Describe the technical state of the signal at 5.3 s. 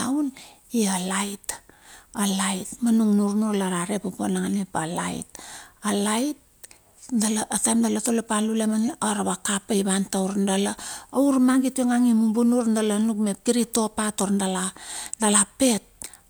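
At 5.3 s the signal is intact, with nothing in the speech there pointing to a technical fault.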